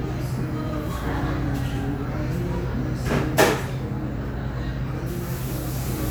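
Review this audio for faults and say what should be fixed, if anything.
Nothing here needs fixing, with no audible technical faults.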